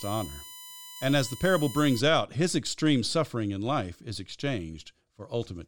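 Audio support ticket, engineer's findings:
USB whine, 0.0–2.0 s, stopping before "out his extreme suffering". Steady 1 kHz comb, strongest at 16 kHz, roughly 15 dB under speech. Spectrogram shows flat horizontal lines; 1 ms bus frames leak through power or ground.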